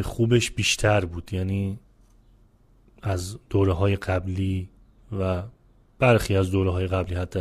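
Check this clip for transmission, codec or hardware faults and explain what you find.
One fault is present: damaged data in the compressed stream at 7.04 to 7.07 s. Corrupted bytes made the decoder misread those frames and lose sync until the next header, giving a short chirp or blip. A spectrogram shows a brief broadband smear; the waveform shows an abrupt discontinuity.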